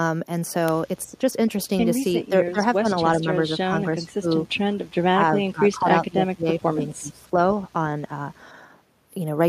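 An echo canceller that likely could not tell the near talker from loudspeaker echo while both sides spoke at once pulls this speech down in four stretches, a case of speech suppressed in double talk: 1.07 to 1.21 s, 2.18 to 2.61 s, 2.81 to 4.45 s and 5.12 to 7.55 s. The voice ducks by roughly 10 to 15 dB in the first three and by about 20 dB in the last.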